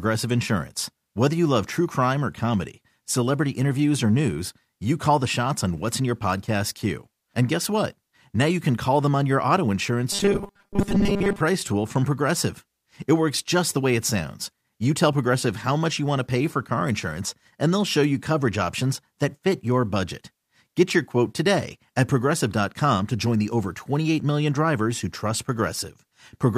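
From 10.12 to 11.41 s, after "them on your auto" and before "tool from", the speech turns into a rigid metallic buzz fixed near 200 Hz, loosely following the words. This robotic sound from repeated short buffers likely means audio arrived too seldom, so a 5 ms chunk kept replaying.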